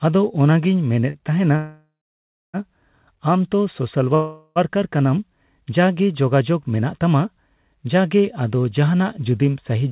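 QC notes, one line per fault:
1.10–1.17 s, short stall from a late packet: right after "ᱚᱱᱟᱜᱤᱧ ᱢᱮᱱᱮᱫ" the sound is held about 40 ms too long with a faint buzz. A packet arrived late, so the receiver stretched the last sound until it came.
1.56–2.57 s, call audio freeze: after "ᱚᱱᱟᱜᱤᱧ ᱢᱮᱱᱮᱫ ᱛᱟᱸᱦᱮᱱᱟ" the last sound smears into a fading buzz, then about 0.63 s of silence, roughly a second inserted in all. Likely packets held up in transit while the jitter buffer ran dry; nothing is lost, it just resumes late.
4.15–4.59 s, call audio freeze: after "ᱛᱚ ᱥᱳᱥᱟᱞ" there's a shorter 0.41 s held, fading buzz with only a hint of silence before playback picks up exactly where it stopped. The audio is band-limited to 4 kHz, which fits narrowband G.711 at 64 kbps.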